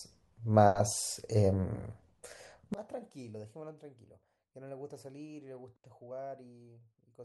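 From 2.74 s to the end, one stereo channel has likely had its polarity flipped, a one channel inverted fault, so summing to mono cancels the shared centre. The speech drops by about 24 dB, leaving only a faint residue of the difference between channels.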